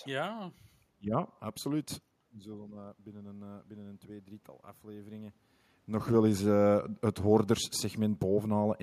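It's a speech clip with one fault, automatic gain rising. From 2.42 to 5.41 s the voice and room noise swell together by about 6 dB as the gain control compensates for an input about 16 dB quieter after the talker moved back around 2 s, finishing just before "nog wel eens".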